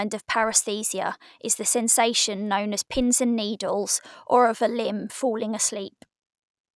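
No technical faults can be heard in this recording.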